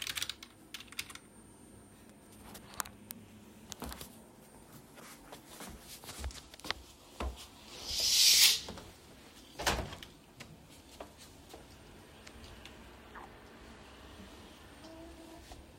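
Nothing stood out as a technical fault on listening to these everyday sounds.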